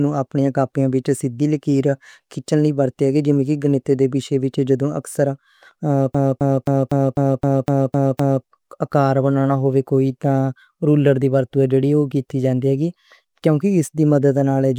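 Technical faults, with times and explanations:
6.14–8.45 s, CD stuck on one turn: the laser keeps jumping back, replaying one 0.26 s slice nine times; the waveform shows identical blocks split by thin silent gaps.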